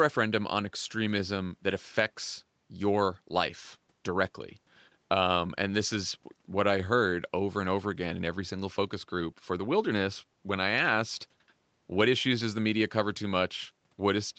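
Nothing stood out on listening to this speech recording, whose top end stops around 8 kHz as expected from the call microphone processing and the WebRTC call path.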